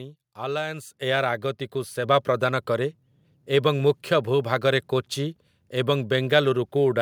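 The level jumps abruptly twice, by about 6 dB at 1.02 s and about 4 dB at 2.04 s, with speech and background noise rising together. This is microphone volume stepped up: the call software judged the input too quiet and raised the device gain in single steps.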